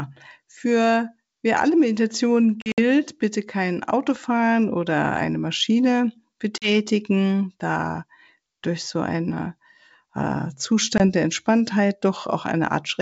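Packet loss on an ADPCM call strikes three times. From 2.62 to 2.79 s, 100 ms of packets vanish in scattered runs (longest 60 ms) before "bitte kein". Another 40 ms go at 6.58 to 6.69 s, and 20 ms at 10.98 to 11.01 s after "durch so einen äh". Each loss leaves a hard-edged silent hole, and the decoder's predictor and step size lose track of the sender's, so the speech returns briefly distorted before settling.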